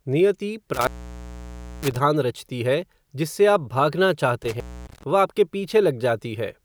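Twice in this speech clip the line drops out the way an intermittent contact does, a loose plug or cable briefly opening the signal path. The first runs from about 0.74 to 1.96 s, with the line open for roughly 960 ms before it comes back on "रचती है जिससे". The second, from 4.43 to 5.03 s, is shorter at about 260 ms open, returning just before "वह आपके". Both have that telltale crackle where the contact breaks and remakes.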